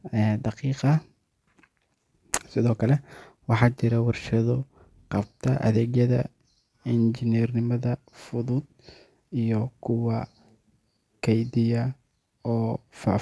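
Speech with a gritty, metallic edge on every s and sh sound across the whole recording, as if the sibilants were smeared into harsh, unrelated tones. The fault is aliasing. The audio was brought down to a lower sample rate, which fits a drop from 44.1 kHz to 22 kHz, without first removing content above the new limit. Energy above 11 kHz folded back below it into false frequencies, sitting roughly 25 dB below the speech, and the spectrum runs right up to the 11 kHz band edge.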